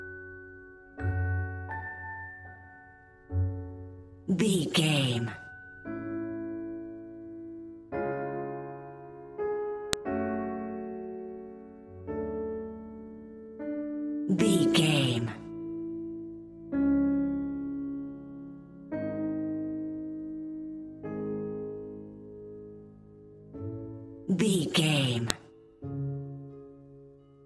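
At 9.93 s and again at 25.30 s there is a sharp, loud click, each one a fault of the file header played as audio. At those points separate WAV segments were joined or streamed with their headers left in place, so the few dozen bytes of header data were read as sample values. That produces a brief, high-level snap lasting around a millisecond, with no relation to the surrounding sound.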